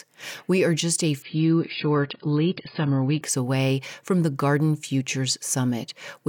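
From 1.22 to 3.22 s the adaptive stream drops to a lower bitrate: speech turns dull, the spectrogram empties above 5 kHz, without any gap.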